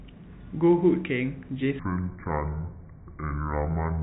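A section at the wrong speed runs from 1.79 s to the end of this speech clip. There the audio plays at 0.618 times its recorded rate, so the voice drops by roughly seven semitones and turns deep and slow, with pitch and tempo shifting down together. The likely cause is a player or edit applying the wrong clock to that stretch. Throughout, the telephone band of the G.711 coding cuts everything above 4 kHz.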